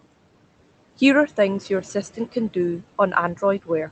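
Noise suppressor artifacts run through the whole clip. The suppressor judges which bands hold steady noise and pulls them down by about 18 dB in each frame. The room noise, sitting about 18 dB below the speech, drops away in pauses and swells back under speech.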